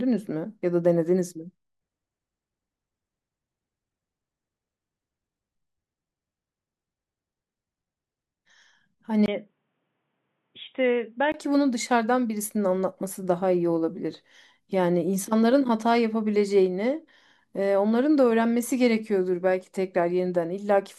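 Speech that turns dull and boxy from 9.26 to 11.34 s, with nothing above 3.8 kHz, a level drop of roughly 5 dB, a faint new noise floor and a 20 ms gap at 9.26 s. The likely cause is an input switched to a poorer device. A simple bandwidth cut would not bring the level change, noise and gap.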